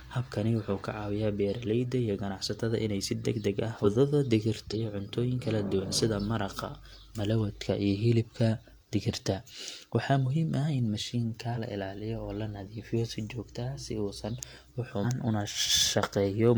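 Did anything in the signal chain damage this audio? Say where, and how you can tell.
Yes. The damage sits at the codec stage: damaged data in a compressed stream. Four short bursts, each about 50 to 60 ms long, fall at 3.81 s, 4.69 s (just before "cuntooyin kala duwan sida"), 11.52 s and 15.00 s. Corrupted bytes make the decoder misread those frames and lose sync until it locks onto the next frame header. Each time, the speech is briefly broken.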